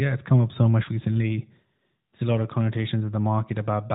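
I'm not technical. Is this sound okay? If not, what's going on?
Yes, nothing in this recording sounds wrong.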